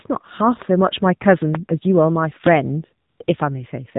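Speech heard through the AMR narrowband mobile codec throughout: nothing passes above 4 kHz, and the voice has the buzzy, synthetic edge of a low-rate vocal-tract model, which fits AMR-NB at around 7.4 kbps. Plain low-pass filtering would dull the sound without making it artificial. From 0.62 to 0.64 s a single loud pop, roughly 15 dB above the speech, sits on top while the speech continues beneath it. That points to a likely electrical step such as a plug, switch or static discharge. A dropout would leave a gap instead. AMR comfort noise appears from 3.10 to 3.20 s and from 3.24 to 3.28 s, where speech frames stopped for 100 ms and 40 ms. The real background gives way to smooth synthetic hiss that switches in and out. Packet-loss concealment would instead repeat or smear the preceding sound.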